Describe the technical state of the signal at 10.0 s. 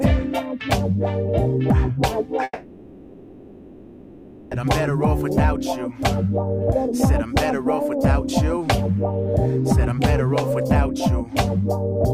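Around 10.0 s the signal is intact, with no dropout, distortion, glitch or other fault to be heard at that point.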